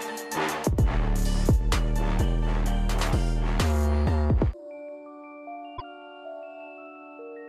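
At 5.74 s the music breaks into a brief glitch lasting until about 5.82 s, roughly 80 ms, caused by damaged data in the compressed stream. A short run of bytes in the encoded file is corrupt, so the decoder misreads the affected frames, loses its frame alignment and has to hunt for the next valid frame header before it can resume.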